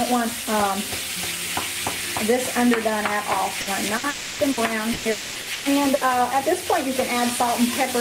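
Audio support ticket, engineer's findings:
Burst of packet loss, 3.61–3.70 s and 3.97–4.06 s. Consecutive packets lost or late on the network path; receiver concealment extends the preceding sound for about 60 ms each, then playback skips ahead. Brief held buzz or fading hiss, about 60 ms of audio gone each time.

Long network dropout, 4.09–4.42 s (300 ms) and 5.11–5.38 s (240 ms). Stretched continuation of the last sound, fading as it goes, never reaching silence; playback resumes later with the covered portion missing. Likely cause: sustained interruption of packet delivery, bridged entirely by receiver concealment.

Repeated packet loss (robotic sound), 4.51–6.04 s. Five separate holes in the packet stream, longest 120 ms, about 420 ms patched in total, roughly 27% of that span. Each patch repeats the last sound before the next hole arrives, producing choppy audio with fragments missing.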